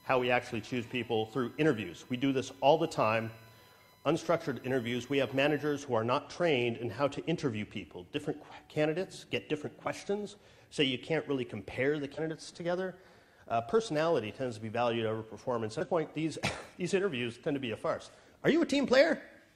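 From the start to 5.82 s, a steady whine sits under the sound. This is USB whine. Its pitch is fixed at 1 kHz, and 1 kHz is also its strongest component. That frequency matches the 1 ms frame rate of a USB bus. The bus draws current in pulses at that rate, and the pulses leak into the audio through the shared power or ground. The whine sits roughly 30 dB below the wanted signal.

At 12.14 to 12.19 s, and again at 15.81 to 15.87 s, there is a short glitch. Each lasts about 50 to 60 ms. This is damaged data in a compressed stream. Part of the coded data was corrupted at those points. The decoder misread the affected frames, lost its place, and resynchronised on the next valid frame header. The result is a brief glitch where clean audio should be.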